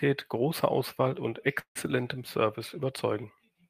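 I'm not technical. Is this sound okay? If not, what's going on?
No, there's a call audio freeze from about 1.59 to 1.77 s. The speech briefly stretches into a fading buzz, then goes quiet for a moment before picking up where it stopped. Nothing's lost; it just runs about 0.16 s late afterwards, likely from delayed network packets.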